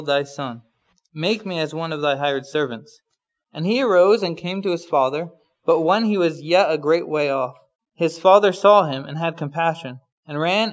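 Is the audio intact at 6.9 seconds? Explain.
No. Aliasing runs through the whole clip, including 6.9 s. High content above 8 kHz folds back as faint, gritty, off-pitch tones, some 35 dB down, which fits a drop to a 16 kHz rate without filtering. Plain band-limiting would only dull the sound without adding these tones.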